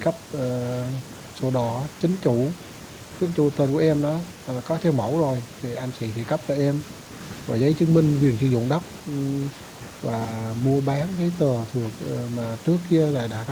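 Listening through the recording, nothing stood out as a technical problem at any point.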